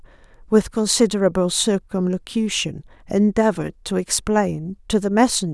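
No technical faults are audible anywhere in this speech recording.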